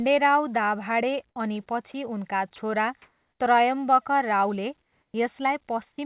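Speech carried over a call path with nothing above 4 kHz, which fits G.711 A-law at 64 kbps. At 1.92 to 1.94 s and 2.56 to 2.58 s, brief 20 ms bits of sound give way to flat noise. This is likely sound dropped by the voice detector and filled with comfort noise. From 3.02 to 3.40 s and 4.82 to 5.14 s, comfort noise likely replaces the real background, which sits about 48 dB below the loud parts. It is featureless and about 4 dB louder in the first gap, about 4 dB quieter in the second.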